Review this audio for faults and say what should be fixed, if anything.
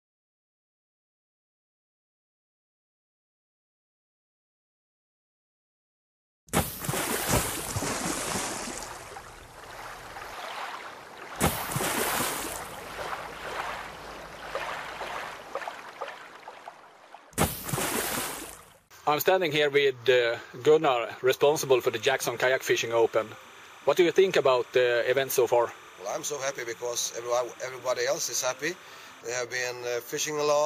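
Timecode bleed: linear timecode leaking from a neighbouring track or cable adds a chirping warble near 1 and 2 kHz, about 25 dB down, from 21.40 to 29.21 s. Route timecode away from audio lines, using separate shielded cables and isolated tracks.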